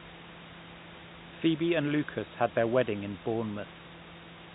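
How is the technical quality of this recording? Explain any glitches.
There are no glitches to explain in this recording.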